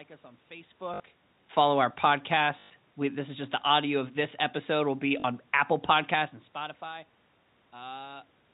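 At 0.94 s, 2.6 s and 5.2 s the speech breaks into a short robotic stutter. Each is packet loss with the last packet repeated. Audio went missing for 60 ms, 100 ms and 40 ms. The receiver filled each gap by replaying its last packet. The loops seldom line up with the pitch. The 100 ms run at 2.6 s buzzes at about 50 Hz, which fits 20 ms packets.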